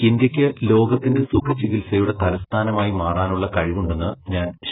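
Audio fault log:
Throughout: AAC compression. The speech sounds dull and muffled, with nothing above about 3.8 kHz, so the upper consonants lose their edge. Sibilants come out fizzy and smeared. Sustained vowels warble. The damage is heavy, and it points to a very low bitrate, about 8 kbps. The likely cause is AAC-LC encoding with too few bits. It lowered the cut-off.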